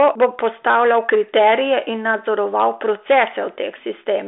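Hard clipping runs through the whole clip. The speech arrives about 8 dB hotter than a stage in the chain can pass, so the loudest peaks, a few percent of the waveform, are sliced flat. Those squared-off tops add harmonics that crackle on the peaks. The narrow telephone band stops near 3.8 kHz. That band fits a higher-rate G.726 ADPCM link, whose coding adds little audible noise here.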